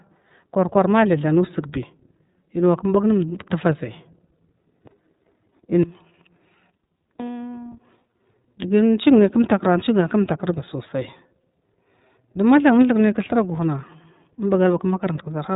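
From start to finish the speech carries iLBC codec damage: nothing above 4 kHz survives, and each 30 ms frame's excitation is coded independently, which fits 13.33 kbps, leaving a plainly rough, synthetic edge. Unlike packet loss, there are no gaps or dropouts.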